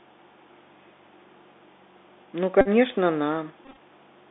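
Throughout the speech, the Bluetooth CVSD headset codec limits the sound to a narrow telephone band of roughly 250 Hz to 3.6 kHz. The codec sends one bit per sample at 64 kHz, signalling only whether the waveform should step up or down while the step size adapts, so loud, bright passages outrun it and distort. The damage is plainly audible: s sounds come through scratchy, and a granular hiss sits under the voice.

From 2.61 to 2.68 s, a Bluetooth headset packet repeated fault appears. About 45 ms of audio was lost, which fits roughly a dozen missing 3.75 ms packets. For each lost packet the decoder replayed the previous packet's bits, and the repetition every 3.75 ms produces a steady buzz near 267 Hz in place of the speech. A second, longer stretch runs from 3.65 to 3.77 s. Here about 79 ms went missing, scattered across 120 ms, and the longest unbroken run is around 20 ms, so the 267 Hz buzz breaks up into short bursts between good packets.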